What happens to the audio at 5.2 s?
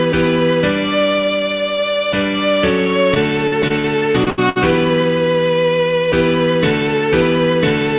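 Nothing goes wrong at 5.2 s: the audio passes through intact, still carrying the narrow call-codec band with nothing above 4 kHz, and no dropout, glitch or distortion interrupts it.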